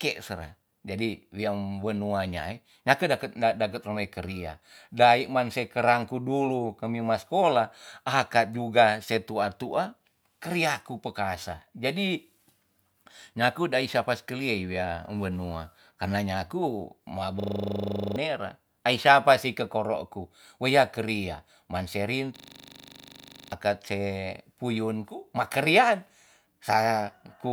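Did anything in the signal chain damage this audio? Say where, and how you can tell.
Yes. The driver or buffer stage froze twice, from 17.4 to 18.16 s and from 22.36 to 23.52 s, while the hardware kept cycling one 40 ms buffer: a system hang loop. Each stretch becomes a rigid 25 Hz buzz, and roughly 0.7 s and 1 s of audio vanish.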